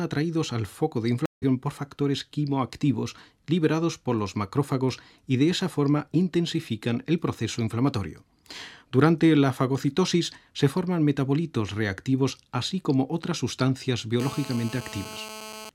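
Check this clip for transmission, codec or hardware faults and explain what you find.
Two faults are audible: a stream reconnect early on and GSM phone buzz near the end.

From 1.26 to 1.44 s there is a stream reconnect. The connection dropped and the player fell silent for 162 ms. It then reconnected and started a new decoder partway through the stream. The audio picks up about a fifth of a second later than where it stopped, so a short piece is missing. The first moment after the gap comes back muted or fading in.

From 14.20 to 15.70 s there is GSM phone buzz. A nearby 2G phone was transmitting in bursts about 217 times a second. The audio circuitry rectified those radio pulses and turned them into sound. The result is a hard, raspy buzz at 217 Hz, rich in harmonics and unrelated to the audio. It sits about 15 dB below the signal. It stays steady throughout, which fits a phone on an active call.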